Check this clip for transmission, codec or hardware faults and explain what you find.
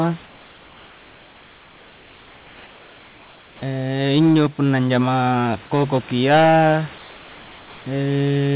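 Three kinds of fault are audible in this speech clip, heard over a call path with nothing above 4 kHz, consistent with a narrowband G.711 A-law codec.

Comfort noise in place of the background, from 0.26 to 3.62 s and again from 6.98 to 7.86 s: the room's real background gives way to a flat, featureless hiss, about 3 dB quieter in the first stretch and about 2 dB quieter in the second. The likely cause is discontinuous transmission, where the receiver synthesises noise while the sender stays silent.

Onset clipped by the voice detector, 3.59 to 3.62 s: the first 30 ms of the returning speech are missing, so it begins abruptly with no soft attack. The likely cause is a voice detector that was slow to register the restart, leaving comfort noise where those opening milliseconds should be.

Hard clipping, 4.01 to 6.76 s: the signal is driven about 9 dB beyond what one stage can pass, so its peaks are sliced flat. 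Those squared-off tops generate harmonics high up the spectrum, heard as a harsh fuzz on every loud sound throughout that stretch.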